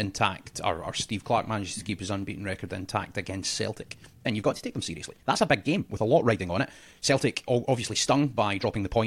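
It's a speech clip, and from about 3.63 s right through to the end the pace suddenly jumps to roughly 1.41 times normal speed while the pitch stays put, which gives you a time-stretched section. That part sounds rushed, with short slices of audio dropped to squeeze it shorter. The likely cause is software compressing that stretch to fit a set length while holding pitch steady.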